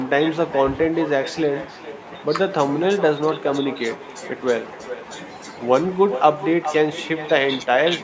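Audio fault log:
throughout: echo with no canceller, the far loudspeaker's pickup returning every phrase roughly 0.4 s later, about 13 dB quieter and thinner, unlike room reverb's smooth tail.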